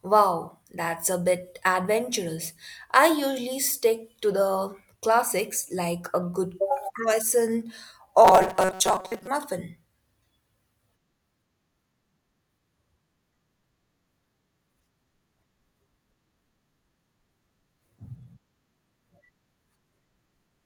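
From 8.25 to 9.27 s, just after "like a good croissant", the speech turns into robotic sound from repeated short buffers: a rigid, metallic buzz pitched at 188 Hz that still loosely follows the words. This is likely caused by audio arriving too slowly, so a short chunk of about 5.3 ms is replayed in place of missing audio, roughly half the time. A spectrogram shows evenly spaced horizontal lines at multiples of 188 Hz, and the waveform shows short, identical stretches tiled end to end.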